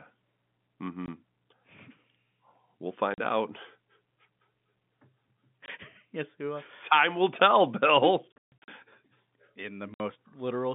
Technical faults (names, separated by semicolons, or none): packet loss filled with silence